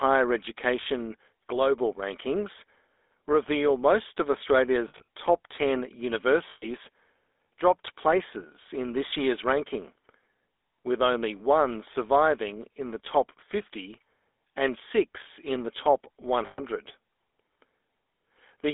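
GSM full-rate codec, throughout the 19-second speech clip: the voice is rebuilt from a vocal-tract model driven by a thinned, regularly spaced pulse excitation, which gives a plainly audible buzzy, gravelly roughness. The line is confined to about 300 Hz to 3.6 kHz, which fits the 13 kbps full-rate coder.

Lost GSM frames, at 4.88 to 5.08 s, 6.50 to 6.68 s and 16.46 to 16.61 s: each gap totals about 120 ms, which fits six 20 ms frames. The decoder repeats the last good frame, so the sound hangs as a rough metallic ring. The first gap, just after "reveal most of", is scattered over 200 ms, with a longest run of roughly 70 ms. The third comes just after "six in the top".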